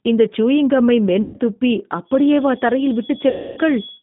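Speech coded with the G.729 codec, which fits an 8 kbit/s G.729A stream, runs through the whole clip. The band is held to roughly 150 Hz to 3.6 kHz, so there is no air or sibilance above that, and the audible roughness comes from the decoder rebuilding each frame from a filter, a pitch estimate and a few pulses rather than from the waveform itself. That slightly synthetic grain is what separates it from plain telephone band-limiting, which sounds dull but smooth. VoIP packet loss concealed by the speech codec occurs twice, from 1.22 to 1.39 s, where about 120 ms of audio went missing, and from 3.30 to 3.60 s, where about 270 ms did, consistent with 30 ms packets. In both gaps the decoder stretches the last pitch and filter into a buzzy tone or coloured noise that fades instead of leaving silence. The sound stays weak and smeared for a short while after data returns, because each frame leans on the one before. 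That lingering recovery distinguishes it from a clean dropout or a simple edit. From 2.03 s to the end, a feedback whistle sits at 3.4 kHz, a thin steady tone well below the speech that swells and fades slowly in level. It never builds up, so it is likely a loudspeaker-to-microphone loop held just short of howling rather than runaway feedback. A steady electrical tone would not waver this way.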